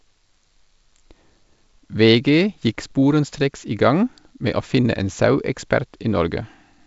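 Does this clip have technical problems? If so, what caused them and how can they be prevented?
No, this speech clip has no technical problems.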